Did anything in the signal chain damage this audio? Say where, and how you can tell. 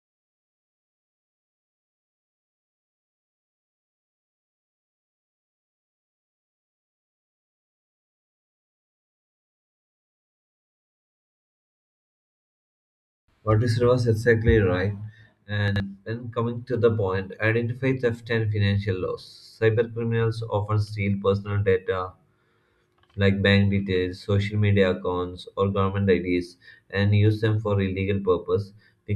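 Yes. The fault is chunks out of order, at the driver or buffer stage. A 40 ms chunk was written two chunks late. Between 15.68 and 15.8 s, just before "when coming to the", the speech jumbles briefly, with three hard joins.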